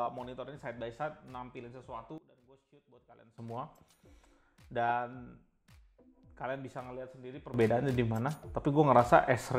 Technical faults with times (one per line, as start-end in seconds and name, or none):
2.18-3.38 sudden gain jump
7.54-9.59 sudden gain jump